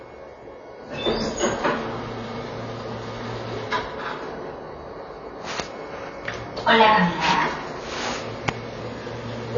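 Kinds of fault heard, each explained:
AAC compression: likely coded as AAC-LC at a low rate, fitting 24 kbps, which discarded detail, leaving nothing above 7.1 kHz and plainly audible codec damage.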